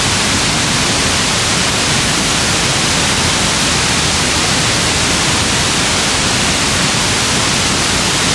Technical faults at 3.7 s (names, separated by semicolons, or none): resampler restarted on every block